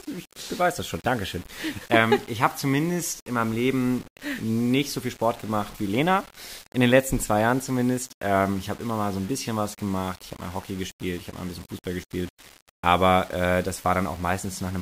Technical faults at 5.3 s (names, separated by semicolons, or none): low bit depth without dither